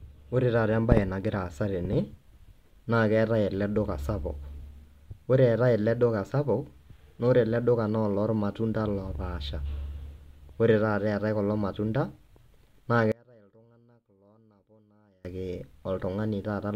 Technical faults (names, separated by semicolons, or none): one channel inverted